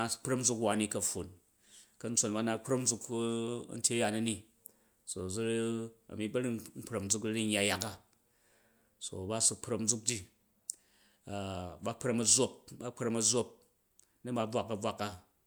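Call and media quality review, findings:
Nothing stood out on listening to this speech recording.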